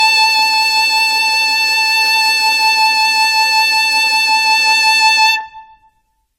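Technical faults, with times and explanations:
Throughout, generation loss: the music sounds swirly, smeared and hollow, with blurred attacks and nothing above 17.8 kHz. This likely comes from repeated decoding and re-encoding, around seven passes, with an AAC-type codec near 64 kbit/s, each pass adding fresh quantisation noise and spectral holes.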